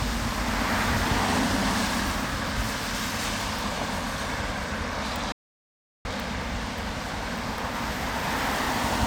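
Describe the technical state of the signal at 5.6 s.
At 5.6 s the signal is dead silent: the sound cuts off abruptly at 5.32 s and resumes just as abruptly at 6.05 s, leaving a hole of about 0.73 s with no background or room tone at all. This is an audio dropout to silence. The likely cause is a momentary loss of the input, such as a link or device interruption or a brief mute, while recording continued writing empty samples, so whatever sounded during that span is lost.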